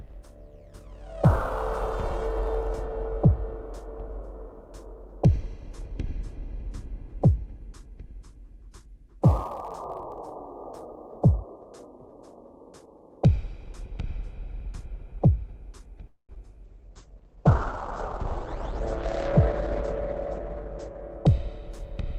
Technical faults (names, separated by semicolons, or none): call audio freeze; short concealed packet loss; call bitrate drop; jitter buffer speed-up